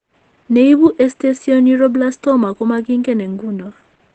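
Opus voice compression is plainly audible throughout the speech. The SILK linear-prediction coder quantises the excitation coarsely, leaving the voice muffled, hoarse and slightly robotic, which fits a bitrate near 12 kbps. On a spectrogram the wideband coding leaves a flat ceiling with nothing above 8.6 kHz.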